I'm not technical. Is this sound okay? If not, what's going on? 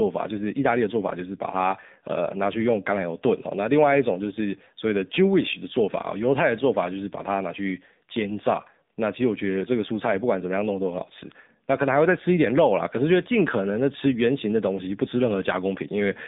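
No, it isn't. From start to finish this speech has passed through the AMR narrowband mobile codec, the system older mobile phones use for calls. It keeps only a narrow slice of sound, roughly 150 Hz to 3.7 kHz, so nothing above that comes through and the voice lacks crispness. It also rebuilds the voice from a simplified model of the throat plus a few pulses, and that damage is plainly audible the whole way through.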